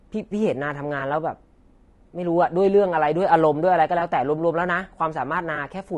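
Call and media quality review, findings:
Rough, grainy speech all the way through, with noise filling the gaps between harmonics and a thin, synthetic top end. Likely low-delay AAC compression (AAC-ELD). Short frames resolve pitch poorly, and the damage fits a starved bitrate around 32 kbps.

Brief smeared, noisy blips at 0.99 s, 3.99 s and 5.55 s, each about 20 ms long. AAC frame loss with concealment: the decoder patches what sounds like one dropped frame each time from the last good spectrum, hence the phasey smudge rather than a gap.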